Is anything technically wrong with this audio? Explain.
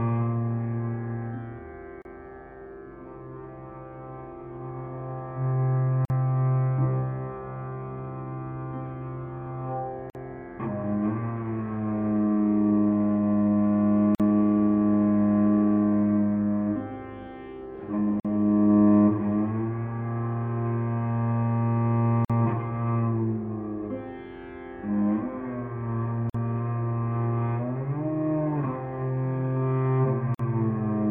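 Yes. There is a repeating gap at a join of encoded pieces, at 2.02, 6.05, 10.10, 14.15, 18.20, 22.25, 26.30 and 30.35 s, one every 4 s. The first dropout lasts about 32 ms and the rest 49 ms each. The audio was encoded in 4-second pieces and joined untrimmed, so each encoder's start-up delay and final-frame padding remain as silence. Each gap has smeared edges, and the sound resumes where it stopped.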